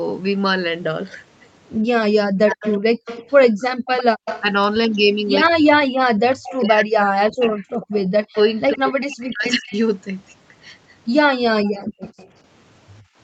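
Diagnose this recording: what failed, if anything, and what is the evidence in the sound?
The speech dips sharply and breaks up in pieces between 2.17 and 3.58 s (roughly 400 ms affected) and again from 5.45 to 11.35 s (around 3 s in all), falling by roughly 40 dB at worst. This is likely speech suppressed in double talk: the call's echo canceller, unable to separate talker from loudspeaker echo, attenuated both.

A faint copy of the speech trails it by 98 ms from 2.5 to 9.77 s and again from 11.8 to 12.29 s, sitting roughly 15 to 20 dB below the direct sound. The cause is likely echo leak at the far end: that loudspeaker side's echo canceller left residual pickup, which was transmitted back.

The room sound drops out abruptly from 3.86 to 4.25 s (about 40 dB, for about 150 ms) and from 11.85 to 13.17 s (about 23 dB, for about 300 ms), then returns. This is background gated by the echo canceller, which clamped the microphone hard while the loudspeaker played.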